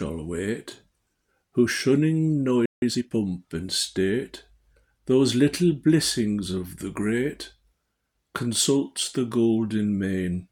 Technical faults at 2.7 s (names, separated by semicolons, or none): playback stall